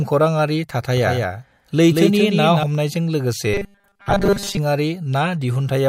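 Doubled audio track from 0.97 to 2.63 s: a second, full-band copy of the speech, about 5 dB quieter, trails roughly a fifth of a second behind, likely captured twice through a slower path. Robotic sound from repeated short buffers from 3.54 to 4.57 s: the speech becomes a rigid, metallic 200 Hz buzz, which fits a 5 ms buffer repeated while most of the audio is skipped.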